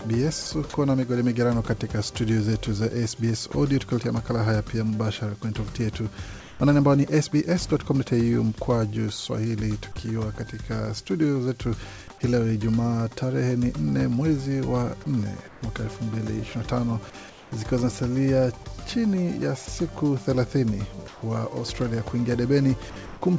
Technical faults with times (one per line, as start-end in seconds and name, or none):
0.42-0.74 sound chopped by the voice detector
3.52-3.54 sound dropped by the voice detector
6.40-6.60 comfort noise in place of the background
15.48-17.52 comfort noise in place of the background
19.66-23.22 sound chopped by the voice detector